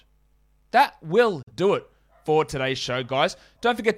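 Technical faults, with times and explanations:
1.42–1.52 s, digital broadcast dropout: the speech fades out over about 8 ms into true silence and resumes at "do it for today's". The missing stretch, roughly 43 ms, fits one corrupted frame being muted. Unlike packet-loss concealment, nothing is smeared or repeated across the gap.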